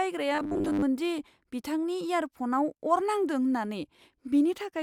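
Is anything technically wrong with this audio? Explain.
Yes. From 0.35 to 0.82 s the speech becomes robotic sound from repeated short buffers: a rigid, metallic buzz fixed at 100 Hz. Audio likely arrived too seldom, so a roughly 10 ms chunk was replayed, covering most of that stretch.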